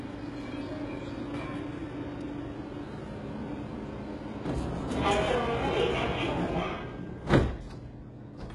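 Across the whole clip the treble has a synthetic, gritty sheen. High content sounds metallic, and nothing reaches above 11.3 kHz. This is likely HE-AAC compression at heavy damage, consistent with a very low bitrate near 12 kbps. The codec coded only the lower spectrum and rebuilt the top by copying lower bands upward. On a spectrogram the upper region shows repeated, blocky patches of lower-band texture, with harmonics misaligned at the crossover and a hard ceiling at 11.3 kHz.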